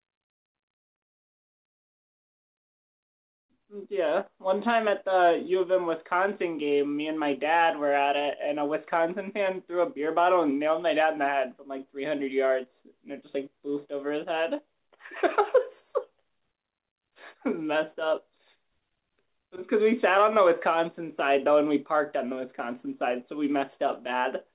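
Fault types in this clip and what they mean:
No fault types are present in this clip.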